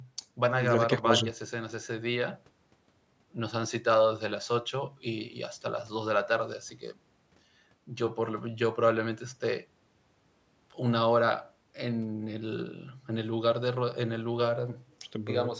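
No technical faults turn up anywhere in the speech; the signal shows only the ordinary effects of call microphone processing, with the lowest bass taken out and nothing present above 8 kHz.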